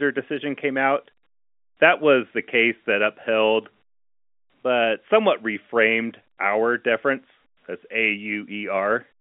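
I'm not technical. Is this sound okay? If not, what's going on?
Yes, this sound is okay.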